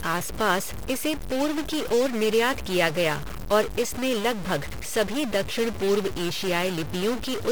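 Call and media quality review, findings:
Stuck bit, present throughout the speech. Symptom: distortion riding on the signal, and pauses fill with noise instead of going quiet. Likely a failed data line or converter holding one bit fixed, offsetting about half the sample values by that bit's weight.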